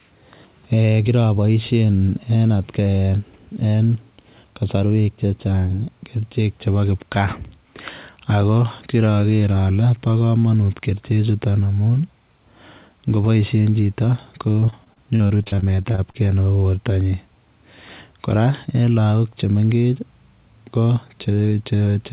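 Repeated packet loss (robotic sound) runs from 14.52 to 16.16 s, right after "ngeboishen chito". A rapid run of short dropouts, the longest 38 ms, is each patched by extending the preceding sound. About a quarter of the stretch becomes choppy, with pieces missing, within audio band-limited to 4 kHz.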